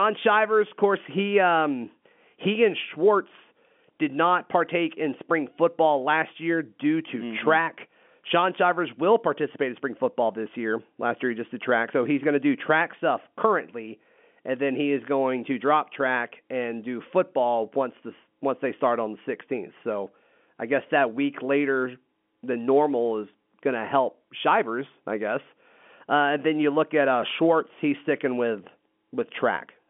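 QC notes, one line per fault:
No fault to note: the speech comes through as ordinary G.711 telephone audio, band-limited to the usual line band.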